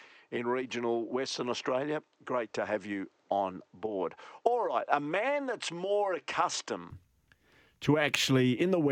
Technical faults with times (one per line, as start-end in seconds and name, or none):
0.00-6.90 input switched to a poorer device